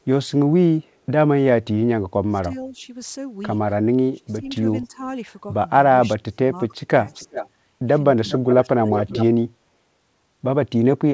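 From 2.28 to 2.8 s the speech dips by roughly 15 dB, then again from 4.07 to 5.01 s by about 20 dB, from 6.17 to 7.41 s and from 8.16 to 9.53 s by about 25 dB, each time losing a few hundred milliseconds. This is speech suppressed in double talk. The likely cause is an echo canceller that, with both ends talking, could not tell the near voice from loudspeaker echo and attenuated everything. Unlike a dropout, the sound ducks rather than vanishing cleanly.

Echo leak overlaps these stretches. Between 4.5 and 4.87 s a faint copy trails the speech by 317 ms, far below the direct sound. From 7.14 to 7.49 s and from 8.28 to 9.25 s the copy arrives 389 ms late and only about 10 dB under the speech. It likely comes from residual loudspeaker pickup that the canceller failed to remove. What sets it apart from suppression is that sound is added rather than removed: a delayed, separate repeat, not reverberant smearing. 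Throughout, the G.722 call path limits the audio to 8 kHz.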